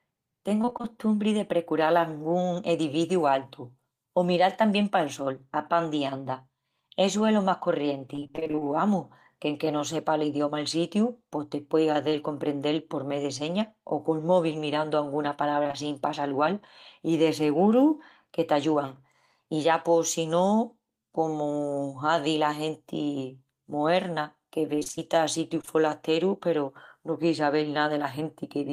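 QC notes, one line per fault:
0.61–0.85 s, 8.15–8.63 s, 15.63–15.75 s and 24.75–25.69 s, repeated packet loss (robotic sound): the speech breaks into a choppy stutter as holes of roughly 20 ms, up to 26 ms, recur in quick succession. That is 6, 12, 3 and 8 gaps respectively, which fits 20 ms packets. Each hole is filled by extending the preceding sound. In the first three stretches this covers about half the time, and in the last about a sixth. On a spectrogram the harmonics flatten into short frozen blocks that repeat, with smeared edges between them. The waveform shows copied-looking cycles where the natural shape of the speech should change.
12.09–12.13 s, short concealed packet loss: about 20 ms of audio never arrived in time, and the decoder filled the hole by continuing the last sound before blending back into the real signal. It is heard as a brief smear or wobble. On a spectrogram it shows as a narrow slice where the harmonics hold steady or turn to soft noise and then rejoin. 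In the waveform there is a small stretch of repeated-looking cycles with a slight seam at each end.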